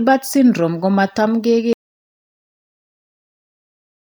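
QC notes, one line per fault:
1.73 s to end: audio dropout to silence. The speech cuts off abruptly and the remaining 2.4 s is silence, with no room tone or noise floor. This likely reflects a lost input, such as a disconnected device, failed link or mute, while recording continued writing silence.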